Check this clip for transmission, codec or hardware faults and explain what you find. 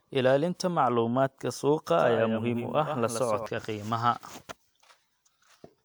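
One fault is present: a doubled audio track from 1.90 s to 3.46 s. A second copy of the speech trails the original by about a tenth of a second, roughly 10 dB quieter. It likely comes from a slower second capture path. The copy is dry and full-band, and it cuts in and out abruptly.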